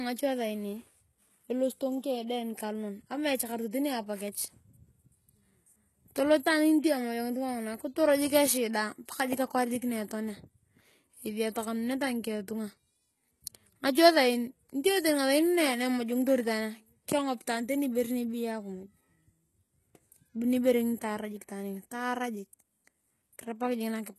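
Throughout, s sounds come out gritty and metallic with nothing above 12.3 kHz, likely HE-AAC compression near 16 kbps rebuilding treble from copied lower bands.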